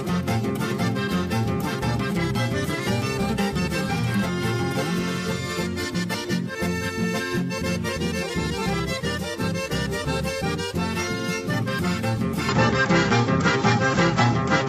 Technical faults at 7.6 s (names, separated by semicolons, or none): none